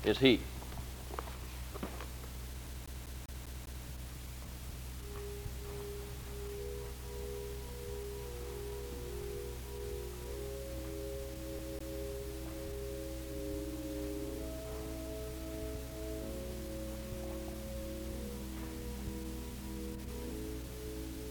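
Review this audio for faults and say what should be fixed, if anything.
CD stuck on one turn at 2.66 to 3.85 s (six repeats) and 11.59 to 11.99 s (two repeats): the same 199 ms slice replays with a brief mute at each jump, showing as identical waveform blocks and repeating spectrogram columns with thin gaps. Re-rip the disc with error-correcting extraction, or clean or replace it.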